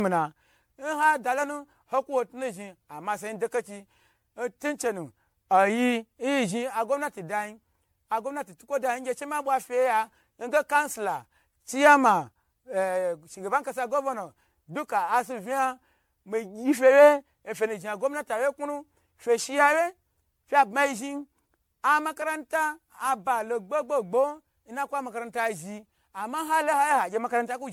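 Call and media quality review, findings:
Generation loss, throughout: likely repeated MP3 decode/re-encode at 96 kbit/s, around ten passes, each requantising on a shifted frame grid. Speech sounds swirly, hollow and smeared beyond what that bitrate explains; consonant attacks blurred; nothing above 17.8 kHz.

Repeated buffer, 22.22 s: audio not delivered in time, so output device replayed its last block once, consistent with a 5 ms buffer. Heard as a click or brief buzz with hard joins either side; no audio lost, just a momentary doubled fragment.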